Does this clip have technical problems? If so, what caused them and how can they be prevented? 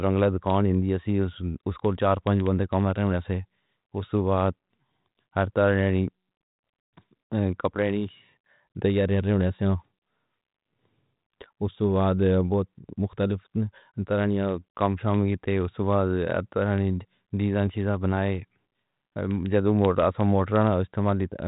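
No, there are no technical problems in this speech. It comes through a G.726 ADPCM path at 32 kbit/s, the rate DECT cordless phones use, so nothing reaches above 3.8 kHz and only a light coding grain sits under the sound.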